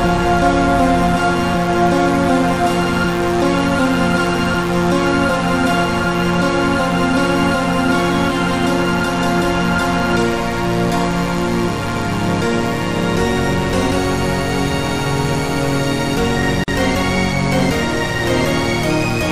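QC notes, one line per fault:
Throughout: mains buzz, a steady raspy 60 Hz buzz sitting roughly 15 dB under the sound the whole way. The rasp comes from sharp switching spikes, twice per mains cycle, that leak in through a dimmer, rectifier or poor shielding and spray harmonics up into the kilohertz range.
16.64 to 16.68 s: gap at a join of encoded pieces, a hole of about 42 ms that cuts the sound off and then picks it up right where it left off. Two separately encoded chunks were butted together untrimmed, so the encoder's start delay and end padding stayed in, and the codec smears the hard edges.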